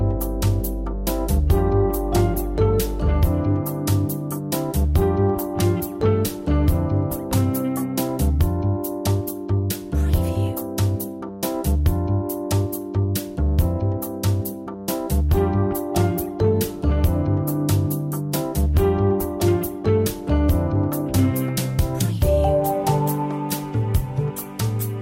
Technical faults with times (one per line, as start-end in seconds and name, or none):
0.00-3.27 mains hum